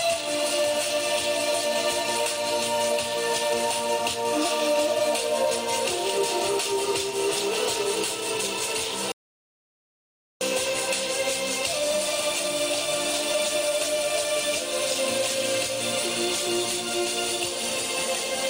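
At 9.12 s an audio dropout to silence begins, 1.29 s of silence with no room tone, unlike a natural pause, likely from a lost input.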